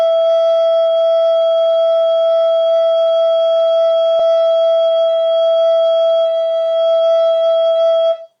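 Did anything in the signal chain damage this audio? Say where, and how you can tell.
Yes. At 4.19 s the network or the jitter buffer makes a skip ahead: about 0.7 s of music disappears, and the two sides of the jump join directly with no gap.

From 4.30 to 7.33 s a jitter buffer speed-up cuts short pitch-period pieces, so the music runs 11% fast at unchanged pitch. The tempo rushes and about 0.3 s is removed.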